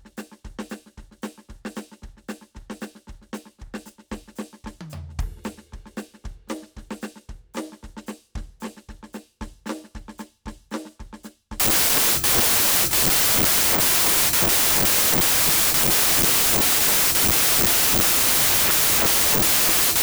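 At 11.6 s the audio is decoded with the wrong sample width. The pattern fits 16-bit data read as packed 24-bit, so most samples are stitched from mismatched bytes. The music sinks into loud, harsh noise and runs about 1.5 times too fast and high until the end.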